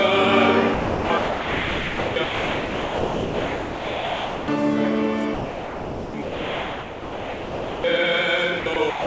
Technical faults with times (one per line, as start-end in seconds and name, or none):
0.74-4.48 sound dropped by the voice detector
5.34-7.84 sound dropped by the voice detector
8.60-9.06 sound dropped by the voice detector